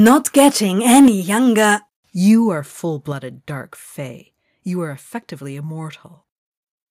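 From 0.05 to 0.48 s the loudest syllables crack harshly. This is microphone overload, likely from input gain set so high that peaks run about 5 dB past the converter's limit. On a waveform the tops are sliced flat, and a spectrogram shows broadband smearing above the voice. At 0.09 s the level drops about 2 dB in one step, a microphone volume stepped down, likely by the call software reacting to the distortion. The waveform envelope shrinks abruptly with no fade.

Heavier overload returns from 0.89 to 1.08 s, about 4 dB over, with a sizeable share of samples flattened. At 1.08 s a sharper step down of about 6 dB follows.

A milder overload, about 2 dB over with very few samples clipped, comes at 1.62 to 1.7 s. Further step-downs of about 4 dB at 2.1 s and about 5 dB at 3.12 s, between "are full" and "dark fae", each show as a stair in the waveform's height.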